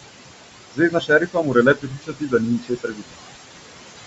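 From the start to the end, noise suppressor artifacts shape the background. The room noise sits about 10 dB under the speech. The suppressor pulls it down by about 21 dB in the gaps and lets it back up beneath each phrase, so the floor pumps in step with the talking and its remainder flutters and warbles. A gate would differ: it snaps the whole signal on and off, while this cut moves band by band and leaves a watery residue rather than clean silence.

Also throughout, the speech has a grainy, breathy edge on its upper consonants and sibilants. The top of the spectrum sounds smeared and partly replaced by hiss-like fill, not simply rolled off. The band itself ends near 8 kHz, as the call microphone processing sets it. This grain is most likely Bluetooth LC3 compression, with settings that fit a mid-rate stream around 48 kbps in 10 ms frames. It can be told from a plain low-pass filter because the loss is textured and noisy rather than a smooth, dull cutoff.

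From 0.71 to 1.56 s, speech cut by the noise suppressor appears. Soft consonants and word tails are pushed down by up to about 21 dB, taking a little under half a second of material in total. They sound swallowed, as if clipped short inside the word.

The same cut returns from 1.75 to 3.24 s, deeper at about 22 dB and covering roughly a second in all, so quiet endings fade into the lowered background. Unlike a dropout, the loudest vowels stay intact and the gaps carry no silence or click. Only the weak parts of the speech sink with the noise.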